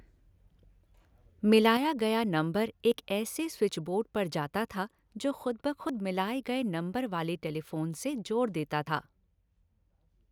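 A short speech recording with three separate problems. From 1.52 to 1.67 s the loudest syllables get a crackly, gritty edge, which is likely microphone overload: peaks about 1 dB over the converter's ceiling have their tops sheared flat, though only a small fraction of samples actually clip. At 1.77 s the whole level, voice and room alike, drops by 6 dB in one jump. That's a microphone volume step-down, likely the call software's automatic gain reacting to that distorted burst just before it. Then there are tiny skips at 2.92, 5.89 and 8.87 s, each losing around 20 ms with the edges butted straight together. Regular 3-second spacing like that is likely the signature of audio missing between chunks, where a piece falls through the gap each time one block closes and the next opens.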